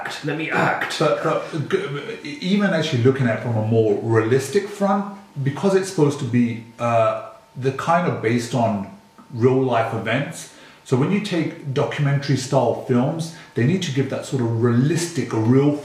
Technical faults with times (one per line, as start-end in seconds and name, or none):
none